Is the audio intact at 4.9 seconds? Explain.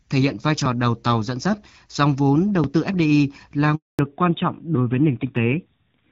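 No. A fallback to narrowband runs from 3.99 s to the end. The call drops from wideband to a narrowband codec, so nothing above 4 kHz remains and the voice turns duller and rougher, consistent with a low-rate AMR-NB mode.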